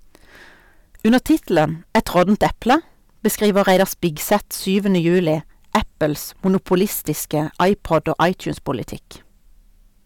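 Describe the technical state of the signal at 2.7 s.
At 2.7 s the speech is hard clipped, as it is for the whole clip. The signal was driven about 10 dB past what a stage in the chain could pass, so every peak beyond that ceiling was sliced flat. Only a small share of samples, around 2 percent, hit the limit, but those squared-off tops add harmonics high in the spectrum, heard as crackle and a gritty edge on the louder syllables.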